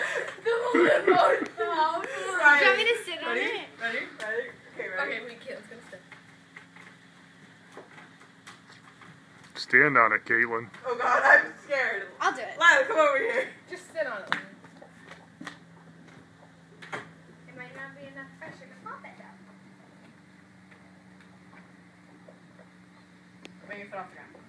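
From 0.0 to 18.66 s, a wrong sample rate slows the sound to about 0.92 speed and lowers pitch 1.47 semitones, fitting 24 kHz audio played at 22 kHz; spectrogram features sit lower and stretch wider.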